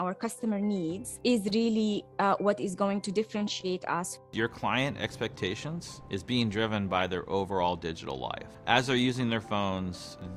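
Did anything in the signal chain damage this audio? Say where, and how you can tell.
Yes, at the codec stage: a corrupt frame was decoded at 6.99 to 7.02 s, a brief burst of misplaced energy peaking around -20 dBFS. Damaged bits in a single frame misplaced energy, unlike a click or dropout.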